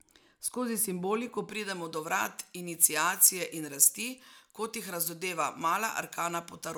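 Pre-emphasis left on, from 1.50 s to the end of the speech at 6.78 s: the treble lift applied before recording or transmission was never undone by the matching de-emphasis on playback. The upper band stands about 11 dB higher at 10 kHz than at 1 kHz, a tilt consistent with a J.17 curve. From that point the speech turns thin and glassy, with sibilants hissing forward and the body of the lower range receding.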